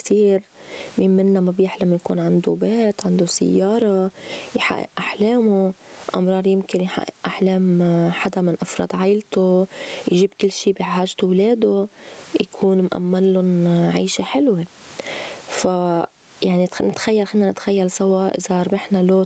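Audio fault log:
throughout gain pumping: The input gain is likely set too high, so a fast limiter clamps down on every loud syllable, swinging the level by about 20 dB. The speech is left squashed, with loud and soft parts closer in level.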